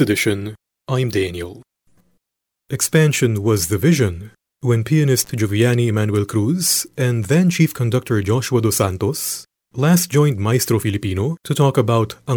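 Speech, with one intermittent contact fault from 5.23 to 5.31 s, right after "was the vision when". The sound drops out for about 46 ms, with crackle at each edge and faint hiss in the gap. A loose cable or plug briefly opened the line.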